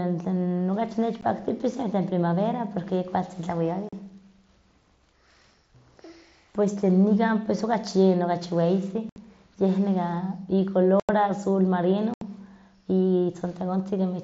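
Unconcealed Bluetooth headset packet loss occurs at 1.21 s and from 3.89 to 3.93, 9.09 to 9.17, 11.00 to 11.09 and 12.14 to 12.22 s. Voice packets between headset and phone went missing with nothing patched in, leaving abrupt silent holes of 15 to 90 ms in the speech.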